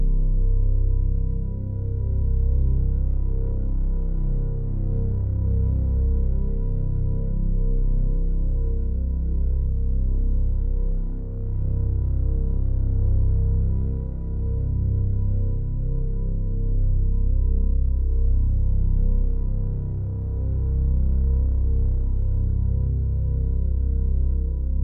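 Nothing in the audio points to a technical fault; the signal stays intact throughout, with no breaks, distortion or other disturbance to be heard.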